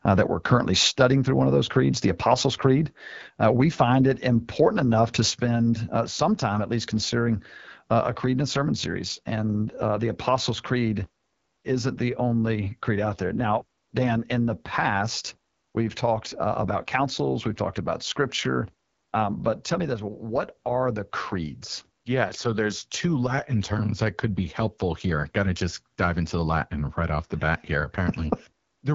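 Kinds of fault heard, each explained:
AMR wideband (HD Voice) codec: The speech was squeezed through an AMR-WB coder running at one of its lowest modes, which fits a rate of about 8.85 kbit/s. The codec rebuilds the voice from pulses driving a vocal tract model up to 6.4 kHz and fills the band just above with shaped noise. At this starved rate the voice turns plainly rough and raspy throughout, and nothing at all remains above 7.5 kHz.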